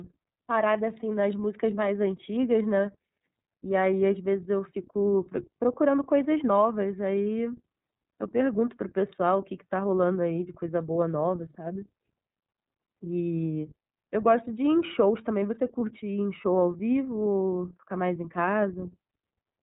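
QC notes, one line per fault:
Throughout: iLBC codec. Speech is band-limited, with nothing above 3.8 kHz, and sounds plainly rough and synthetic, which fits 30 ms frames coded independently at 13.33 kbps.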